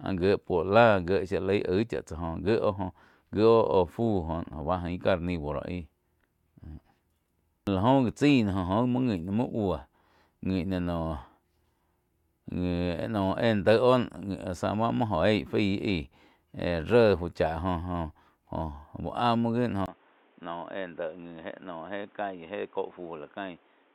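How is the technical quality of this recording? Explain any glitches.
The recording has one fault, near the end. At 19.86 s, after a 20 ms gap, the speech turns dull and boxy until the end. Nothing remains above 3.8 kHz. The level drops noticeably and new background noise appears. The likely cause is an input switched to a poorer device with a narrower band.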